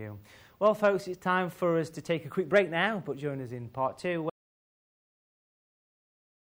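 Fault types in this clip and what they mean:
Audio dropout to silence: from 4.30 s to the end, the sound cuts off abruptly and the final 2.2 s are silence with no room tone. The input was likely lost while the recorder kept writing silence, so anything after that point is gone.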